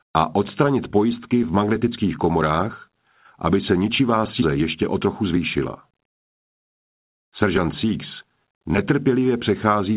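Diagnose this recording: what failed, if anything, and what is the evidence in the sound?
At 4.42 s the sound jumps abruptly forward with no silence or fill, as if a chunk were snipped out and the two edges butted together. Roughly 0.7 s of material is gone. This is a skip ahead at the network and jitter-buffer stage: audio was lost in transit or discarded when the buffer overflowed, and playback resumed at the later audio already queued, so the delay dropped by a similar amount in one step.

From 5.06 to 5.40 s the sound runs noticeably fast, about 110% speed, at unchanged pitch. From 5.91 to 7.44 s it runs more subtly quick, about 104%. The first stretch has a hurried, compressed feel rather than a pitch shift. This is jitter buffer speed-up in the receiver's buffer stage: with more audio queued than its target, it repeatedly cut out short pitch-period-length slices to shrink latency. 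Roughly 40 ms and 50 ms were removed in the two stretches. Throughout, the G.711 call path holds everything below 4 kHz.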